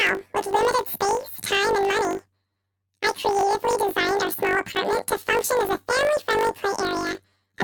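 Throughout the speech, planar audio is read as interleaved: each 20 ms block of all-left then all-right samples is split into pairs, so every block plays twice at double speed. Because the blocks are so short, this comes across as a robotic 50 Hz buzz rather than a clear octave jump.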